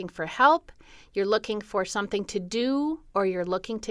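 Nothing in this recording stands out as a technical fault, so there's no sequence of problems to walk through here.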